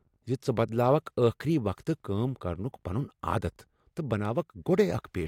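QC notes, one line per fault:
Nothing stood out on listening to this speech clip.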